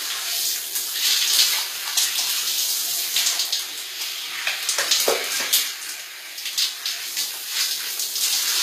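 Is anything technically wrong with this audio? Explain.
Yes. Throughout, the audio carries plainly audible HE-AAC compression damage, likely from a low-bitrate encode around 24 kbps. The treble is bright but synthetic: it is rebuilt by copying lower bands upward, so sibilant and hissy detail sounds gritty and metallic, and nothing remains above about 14.9 kHz. A plain low-pass would instead sound dull.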